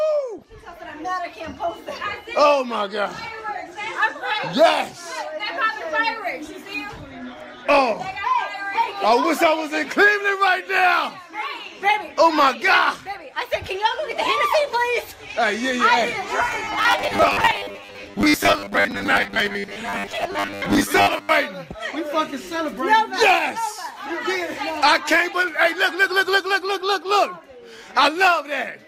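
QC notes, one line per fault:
0.38–0.44 s and 17.38–17.41 s: DAB burbling. Short blips of noise sit over the audio as bit errors slip past error correction into the MP2 data. Corrupted scale factors make individual sub-bands jump in level for up to a frame. The brief bursts point to a low residual error rate.
16.48–21.31 s: robotic sound from repeated short buffers. The sound becomes a rigid metallic buzz at 100 Hz that still loosely tracks the underlying audio. This is likely a playback stage repeating 10 ms chunks, covering roughly half the time while real audio is skipped.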